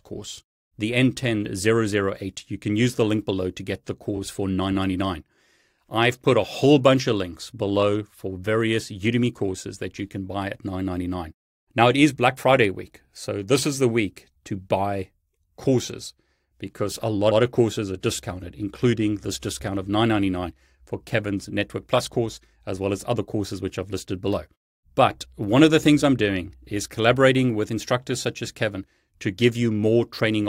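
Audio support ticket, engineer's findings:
Repeated frames at 17.30–17.39 s, between "buy courses because a" and "of courses are discounted". Stutter: a 92.9 ms block plays twice. Probable component: encoder output or transport layer. A run of compressed frames, which fits about four, was written or sent twice, so the decoder replays it. Stream runs 92.9 ms long.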